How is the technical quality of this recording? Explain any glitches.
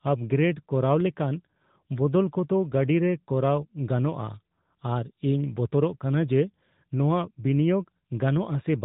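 The quality is limited by one fault running through the whole clip. Throughout, the speech sounds muffled and plainly buzzy and synthetic, the mark of the AMR narrowband mobile codec. Nothing above 4 kHz survives, and the pulse-driven vocal-tract model, at a bitrate pointing to the second-highest 10.2 kbps mode, adds the artificial edge.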